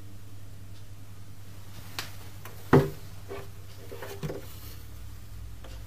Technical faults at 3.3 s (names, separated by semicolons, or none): compressed frames skipped